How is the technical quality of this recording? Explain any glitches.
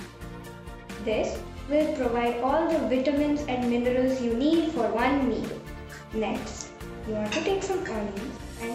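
No glitches: there are no dropouts, clicks, level jumps or gaps anywhere in the recording.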